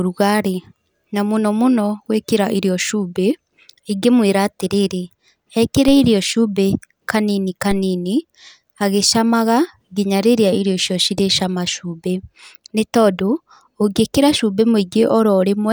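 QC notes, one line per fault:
5.88 s and 7.71 s: DC step. The zero line jumps by about -14 dBFS, then drains away through a 5 Hz high-pass. Each jump gives a low thump.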